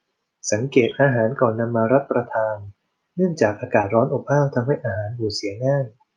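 At 0.89–0.93 s, 3.81–3.85 s and 5.25–5.29 s the speech shows short concealed packet loss. Each time, about 20 ms of audio failed to reach the decoder in time. The receiver bridged the hole by extending the preceding sound, following its pitch where it was voiced and using shaped noise where it was not, before cross-fading back into the real signal. Each one sounds like a brief smear or wobble. The call path's high-frequency ceiling sits near 12 kHz.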